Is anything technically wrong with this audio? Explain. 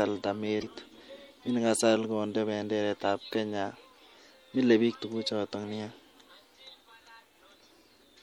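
Yes, there are two problems in this speech clip.

Throughout the clip the sound is watery and swirly, with the top end cut off flat and sibilants turning metallic and chirpy. That's most likely MP3 compression, and the damage is plainly audible. When the encoder runs short of bits, which fits a rate around 64 kbps, it drops the treble above a fixed point and lets weak frequency lines flicker on and off between frames. That flicker produces the swirl, and consonant attacks get smeared.

There are also two short glitches, from 0.59 to 0.63 s and from 7.67 to 7.71 s, each a brief blip lasting a few tens of milliseconds. These come from damaged data in the compressed stream. A stretch of bytes there was corrupted, so the decoder misread those frames, lost sync and hunted for the next valid frame header. You hear a brief glitch.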